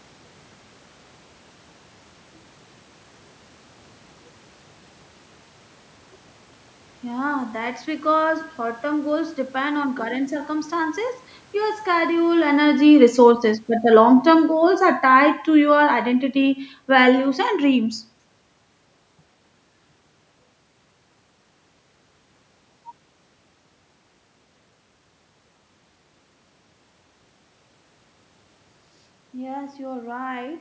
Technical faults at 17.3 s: automatic gain falling

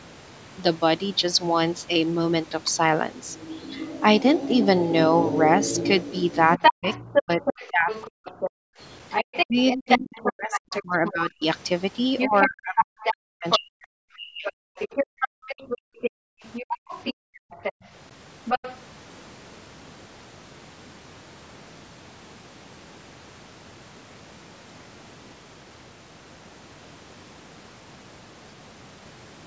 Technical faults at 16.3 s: other side's voice leaking through; background gated by the echo canceller

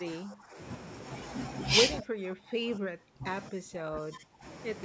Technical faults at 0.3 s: speech suppressed in double talk

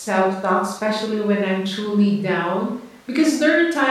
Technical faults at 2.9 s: none

